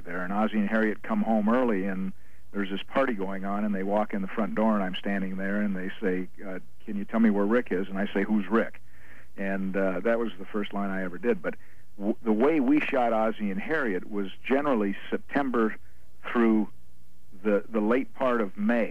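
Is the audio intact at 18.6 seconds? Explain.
Yes, at 18.6 seconds the audio is intact, with nothing to be heard there that breaks or disturbs the sound.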